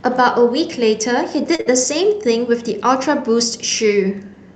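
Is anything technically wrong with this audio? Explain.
Yes, there are two connected glitches, both a bit after 1.5 s in this speech clip.

The first is a short stall from a late packet, spanning about 1.55 to 1.74 s. A packet showed up late, the jitter buffer ran dry, and the receiver stretched the last bit of sound for about 34 ms until it arrived, then carried on from the same spot. Nothing is lost, but one sound hangs on a touch too long, with a faint buzzy or dipping quality.

Inside that stall, from about 1.61 to 1.67 s, there's a burst of packet loss. Packets were lost or didn't make it in time, so the receiver filled about 46 ms by continuing and fading the last sound. When playback picks up again, about 40 ms of audio is simply gone. You hear a brief held buzz or hiss, then a small jump forward.

The call path underneath is Opus, with the top end rolling off around 8 kHz and a bitrate of around 32 kbps.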